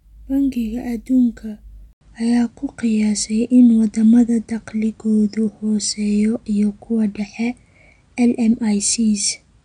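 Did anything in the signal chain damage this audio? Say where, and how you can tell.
Yes. An input switched to a poorer device at 1.93 s, and the rest of the speech stays on it. An 80 ms gap of silence marks the changeover. After it, the speech is duller, with nothing above 9.6 kHz, and the level shifts by about 5 dB. A new noise floor about 50 dB below the signal comes in with it. The system likely rerouted capture at the device or driver stage to a narrower-band microphone with its own gain and noise.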